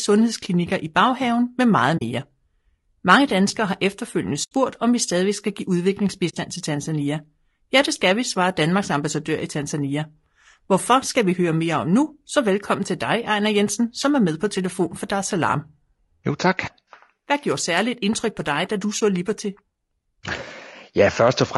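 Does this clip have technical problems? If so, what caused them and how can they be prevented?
Yes, two things are going on in this speech clip. All the way through, the voice sounds rough and grainy, with a hissy fill between the pitch harmonics and a thin, somewhat synthetic top end. That's likely low-delay AAC compression, something like the AAC-ELD used in video calls, running at a lowish bitrate around 32 kbps, where the short frames can't resolve harmonics well and the bits run out. Giving the stream more bitrate, or using a longer-frame codec when latency allows, would prevent it.

There are also four soft dropouts: 1.97 to 2.02 s, 4.43 to 4.52 s, 6.29 to 6.34 s, and 18.99 to 19.01 s. These are AAC frame loss with muting. Frames never arrived, so the decoder zeroed their spectrum, and the overlapping windows fade the sound out and back in, leaving a smooth hole. The 40 ms gaps fit two lost 20 ms frames, the 4.4 s one about four. 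Protecting the transport with redundancy or FEC, plus decoder-side concealment, would prevent it.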